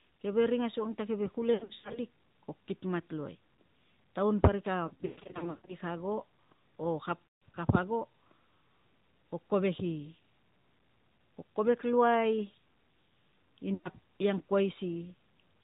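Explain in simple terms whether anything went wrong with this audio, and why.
Yes, a couple of things went wrong. The whole recording has passed through the AMR narrowband mobile codec, the old 2G/3G phone system. It throws away everything above 4 kHz and rebuilds the speech from a simple model, so it sounds muffled, buzzy and a bit synthetic.

On top of that there are lost AMR speech frames, where chunks of the signal didn't survive the radio link and the decoder had to guess. You'll hear the voice smear, warble or fade briefly at 1.54 to 1.99 s, 4.88 to 5.76 s (the worst, with gaps adding up to about half a second), 7.27 to 7.39 s and 13.74 to 13.90 s.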